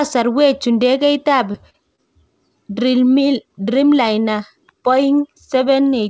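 Short concealed packet loss strikes this speech clip three times just after "chu ndegeit ab", at 1.52 to 1.56 s, 1.70 to 1.76 s and 1.96 to 2.00 s. Each time, audio missed the decoder, which bridged the gap by stretching the preceding sound for about 20, 40 and 20 ms, leaving brief smeared wobbles. The call path itself carries nothing above 8 kHz, which fits G.722 at 64 kbps.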